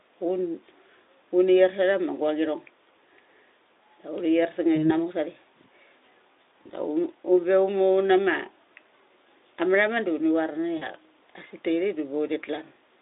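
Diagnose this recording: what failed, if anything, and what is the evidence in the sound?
The network stage failed: VoIP packets were dropped three times, and the decoder's packet loss concealment filled each gap by extrapolating the last pitch and filter at falling gain. At 4.75–4.91 s and 6.63–6.70 s the speech smears into a brief buzzy tone or coloured noise that fades, consistent with one lost 20 ms frame each. At 10.77–10.87 s, right after "da uni var", a longer smear suggests about 40 ms missing. Each time the speech stays weakened briefly after packets resume, through the narrowband Speex line.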